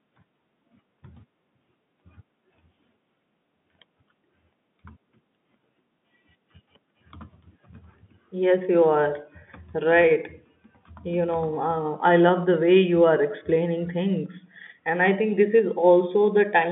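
Nothing is technically wrong with this speech recording, which carries the narrow band of a telephone line, roughly 150 Hz to 3.6 kHz, consistent with ordinary G.711 telephone coding.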